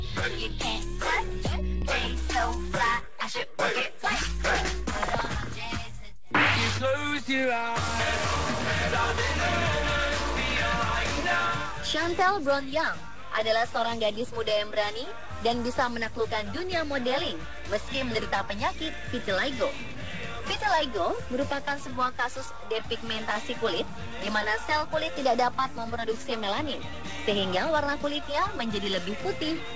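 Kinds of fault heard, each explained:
None to report: the audio carries the expected character of a wideband call codec, with nothing above 8 kHz, which is that path working as designed.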